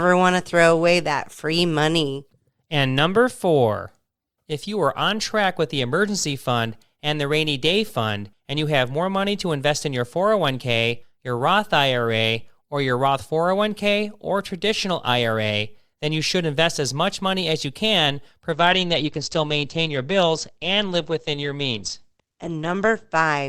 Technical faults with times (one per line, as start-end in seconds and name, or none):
18.52-23.48 adaptive stream at a lower bitrate